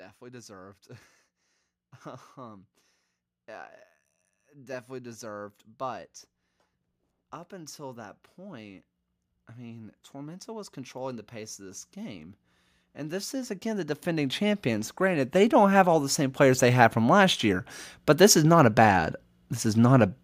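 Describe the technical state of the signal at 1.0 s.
At 1.0 s the signal is intact, with no dropout, distortion or other fault in the speech at that moment.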